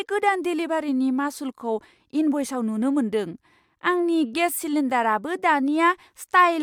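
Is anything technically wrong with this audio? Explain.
No, nothing here gives me any technical trouble; the speech comes through without a single glitch, dropout or distortion worth pointing out.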